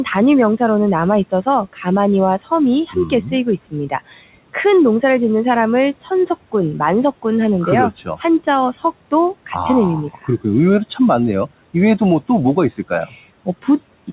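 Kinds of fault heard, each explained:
Speech cut by the noise suppressor: The suppressor mistook parts of the speech for background noise and pulled them down with it. Soft sounds and word endings come out swallowed or faint. This happens six times across the clip, with dips of about 12 to 18 dB.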